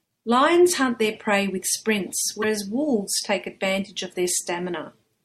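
At 2.39 s, the speech breaks into a brief glitch that lasts until 2.44 s, about 50 ms in all. This is damaged data in a compressed stream. A short run of bytes in the encoded file was wrong at that point. The decoder could not read those frames correctly. It lost sync and had to search for the next valid frame header. The garbled output while it recovered is what produces the blip.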